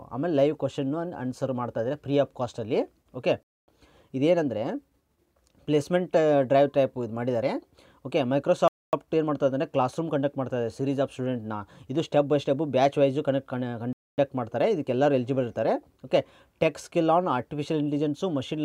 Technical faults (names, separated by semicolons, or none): gap between chunks